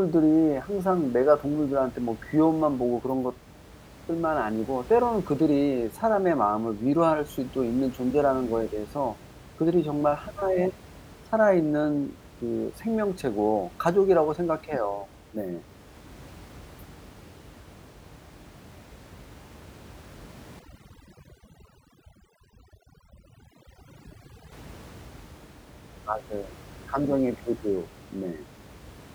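From 20.59 to 24.52 s the background drops to near silence flecked with twinkling specks. This is overdone noise removal: a reduction stage set far too strong shuts off frequency bands near its noise estimate, taking the quieter parts of the voice along with the room noise, which elsewhere sits about 22 dB below the speech.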